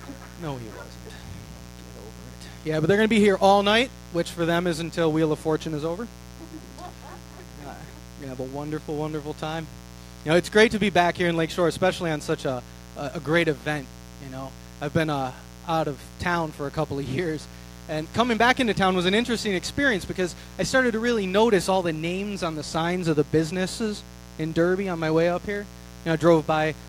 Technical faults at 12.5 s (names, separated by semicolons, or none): mains buzz